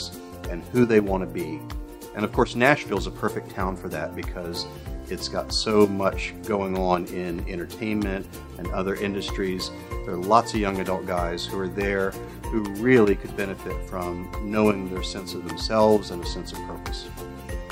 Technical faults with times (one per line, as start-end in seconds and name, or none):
none